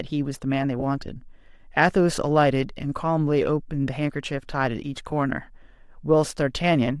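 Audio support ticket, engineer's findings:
Bluetooth LC3 compression, throughout: grainy, breathy edge on the speech, likely from the LE Audio codec's transform coding and noise-filled upper bands. The damage fits a rate near 48 kbps.

Lost LE Audio frames, 0.80 to 0.83 s and at 5.11 s: brief noisy smears where the decoder repeated the last spectrum with scrambled signs. The gaps of about 20 ms and 10 ms fit one or two missing 10 ms frames.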